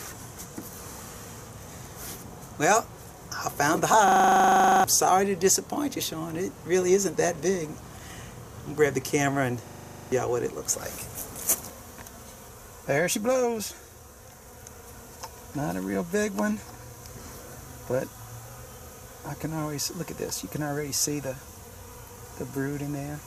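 At 4.08 s and again at 9.68 s the sound locks into a system hang loop, lasting until 4.84 s and 10.12 s. While the system stalled, the hardware kept replaying one 40 ms stretch of its buffer, producing a rigid 25 Hz buzz. Roughly 0.7 s and 0.4 s of audio are lost. The waveform shows identical blocks tiled end to end. A spectrogram shows evenly spaced vertical striations with harmonics every 25 Hz.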